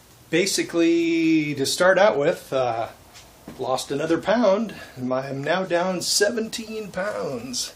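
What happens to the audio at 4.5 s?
Nothing goes wrong at 4.5 s; the audio runs through that moment intact, with no dropout, click or other fault.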